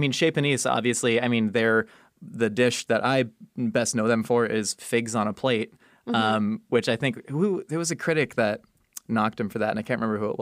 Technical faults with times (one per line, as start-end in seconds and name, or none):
none